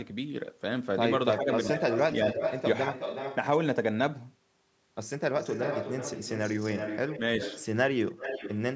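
Speech suppressed in double talk occurs from 1.37 to 1.47 s: for about a tenth of a second the voice sinks by roughly 10 dB, a brief dip rather than a full cutout. This is likely the echo canceller reacting to both sides speaking at once; unable to tell the near talker from the loudspeaker echo, it pulled the level down on everything passing through.

Echo leak follows, starting as that dip ends, in five stretches: 1.45 to 2.63 s, 2.92 to 3.36 s, 5.38 to 7.2 s, 7.4 to 7.66 s and 8.09 to 8.6 s. A second copy of the voice trails the original by about 365 to 377 ms, sitting only about 5 dB below it, and about 10 dB below in the 7.4 s stretch. The likely cause is a far end on loudspeaker whose canceller failed to remove the pickup, returning the echo.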